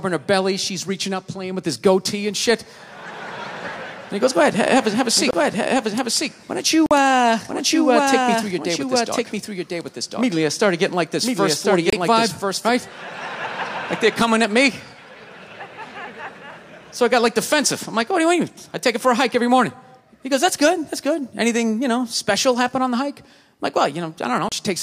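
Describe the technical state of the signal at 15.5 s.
At 15.5 s the signal is intact, with no dropout, distortion, glitch or other technical fault at that moment.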